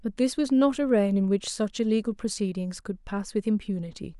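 At 2.21 s the speech drops out for about 2.7 ms. This is an underrun with a held sample. The output buffer ran dry, and the converter froze on its last value. The waveform sits flat, a gap that fits a 128-sample buffer. Around 3 ms of audio never arrives.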